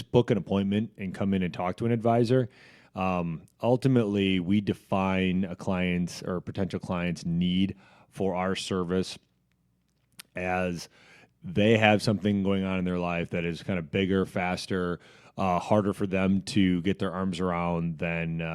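No technical faults can be heard anywhere in the speech signal.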